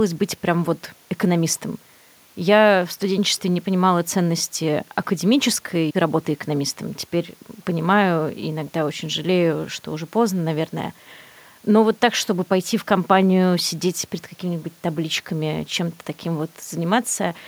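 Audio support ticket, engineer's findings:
Listened through the full speech recording and nothing stood out as a fault.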